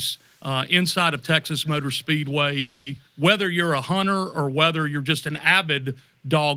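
Echo leak at 0.19 to 0.45 s, 1.42 to 1.84 s and 2.27 to 2.31 s: a faint copy of the speech trails it by about 219 ms, very quiet at first and strongest in the middle stretch. The likely cause is a far-end loudspeaker whose echo canceller let some pickup return. Call audio freeze from 2.59 to 2.88 s: the last sound is stretched into a fading buzz or hiss lasting about 270 ms with no silence. This likely comes from delayed packets emptying the jitter buffer. Speech then resumes where it stopped, so nothing is lost, only delayed.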